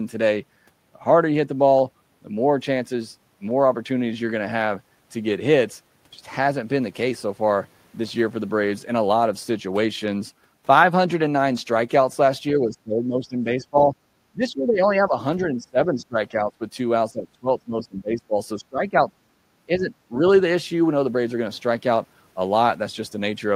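The speech repeatedly dips and breaks up at 12.54–13.95, 14.32–15.15, 15.45–16.62, 17.12–17.49, 17.65–18.34, 18.57–19.11 and 19.67–19.93 s, sinking by roughly 10 to 25 dB. This is likely speech suppressed in double talk: an echo canceller mistaking near-end speech that overlaps the far-end echo for echo.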